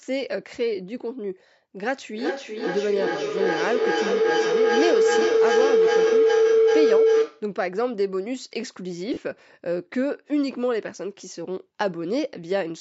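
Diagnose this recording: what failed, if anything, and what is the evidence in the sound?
Feedback howl in the acoustic loop around the call, where two devices in the same room are both on it. From 1.82 s to 7.56 s a tone builds around 500 Hz, pulsing roughly every 0.4 s, and climbs to about 6 dB above the speech. Each trip from loudspeaker back into the other microphone adds gain, so the repeats grow instead of dying out. The loop narrows to the frequency it favours, and the pulse spacing tracks the loop's round-trip delay.

Lost LE Audio frames on the Bluetooth link. At 9.14 to 9.17 s there's a 30 ms gap, which fits three lost 10 ms frames. The LC3 decoder covered it by reusing the last good spectrum with randomised signs, so instead of a dropout you get a brief noisy smear where the tonal detail gets scrambled.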